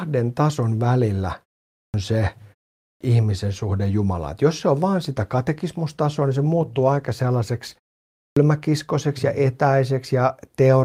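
A speech recording with two kinds of fault. Three times the speech suffers a clipped start after a pause: at 1.81 s, 2.85 s and 8.23 s, after silences of 0.44, 0.39 and 0.52 s, the opening of the next phrase is missing. Roughly 130, 160 and 135 ms are lost, so each phrase bursts in without its first sounds. The output device dozes during the short silence and needs a moment to wake before it plays again. On a waveform each onset jumps abruptly out of silence with no natural rise. On a spectrogram the first column of energy starts with a hard vertical edge. From 5.02 s to 10.19 s there is a call bitrate drop. The speech turns rough and watery and loses its crispness. That sound fits the encoder being pushed from around 64 kbps down to about 28 kbps after the call's bandwidth estimate fell. For about 3.4 s it sits at that lowest rate, where the codec quantises coarsely. On a spectrogram the remaining harmonics look smeared and blotchy across that stretch.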